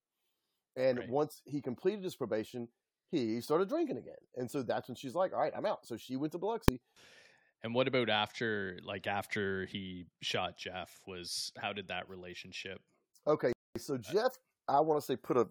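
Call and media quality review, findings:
Invalid numbers at full scale, 6.68 s: a single sharp bang in the speech, about 1.45 ms long, which fits a 64-sample processing block. A DSP stage produced infinite or invalid values, clamped to full-scale output for that one block. Suspect the gain or filter math.

Rebuffering stall, 13.53 to 13.76 s: the speech drops to silence and resumes exactly where it stopped, with nothing lost and about 229 ms added. The player's buffer ran dry and waited for more data. Check network delivery and buffer sizing.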